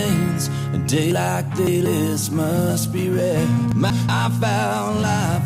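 From 1.12 to 1.86 s, chunks play out of order: a 186 ms block arrives three blocks late, leaving a jumbled passage with hard joins that show as waveform discontinuities. From 2.22 s onward, periodic clock jitter at around 1.5 kHz adds a rough metallic edge, visible as sideband copies flanking each spectrogram component and vanishing in gaps. From 3.72 to 4.09 s, a block lands one chunk late, producing another brief garble with sharp edges at its boundaries.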